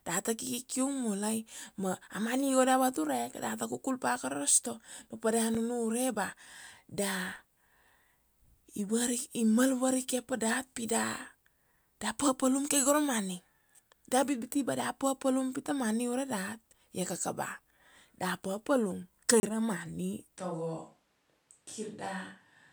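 At 5.55 s a block of digital silence, about 5 ms long, leaves a click where samples were zeroed. A 30 ms gap at 19.40 s before "ra money" is heard as a short hole with hard edges. After "ra money", from 20.37 s to the end, the speech turns hollow and roomy, roughly 5 dB quieter over a faint noise floor, likely a switch to a distant microphone.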